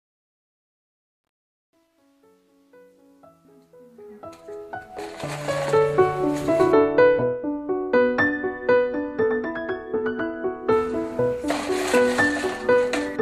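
From 0.0 to 5.86 s the fade-in shows truncation distortion: without dither, an 11-bit stage leaves gritty steps, worst until 4.18 s, visible as staircase waveforms and broadband spectral hash.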